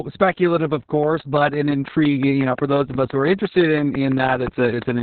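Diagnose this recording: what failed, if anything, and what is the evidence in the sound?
The whole clip has been through heavy Opus voice compression at the codec stage. Nothing reaches above about 4.4 kHz, so the speech is muffled, hoarse and slightly robotic. That points to SILK's narrowband mode at a very low rate, which fits roughly 6 kbps with 60 ms frames. On a spectrogram the energy stops at a hard ceiling near 4.4 kHz, and the harmonics below it look smeared and coarse because the excitation is coded with very few bits.

A train of clicks starts at 1.03 s, just after "speculative of", and runs to 5.0 s. The pulses are regular at about 5.8 per second, around twenty in all, and peak about 10 dB above the speech. They tick through the pauses as well, so they sit on top of the signal rather than coming from it. The likely cause is interference from nearby equipment or a faulty connection or power supply at the analogue or converter stage. 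On a waveform they show as evenly spaced, similarly shaped spikes. On a spectrogram they are thin vertical lines spanning the band.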